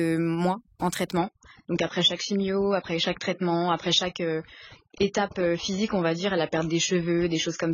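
Throughout the speech, overdone noise removal leaves the background lowered but speckled with twinkling, chirpy artefacts. Frequency bands near the estimated noise floor were pulled down too hard, taking quiet voice detail with them. Unlike a low bitrate, this is present from the first moment.

At 1.17 s the adaptive stream switches to a lower bitrate and stays there to the end at 7.73 s. The treble abruptly stops above about 7 kHz and codec smearing rises, which fits a drop to a very low-bitrate AAC version. The sudden step without any gap distinguishes it from dropouts or a slowly closing filter.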